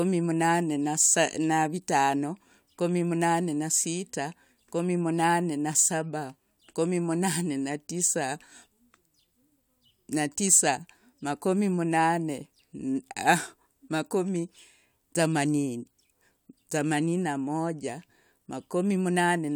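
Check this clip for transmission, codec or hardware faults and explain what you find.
Nothing wrong can be heard anywhere in this recording.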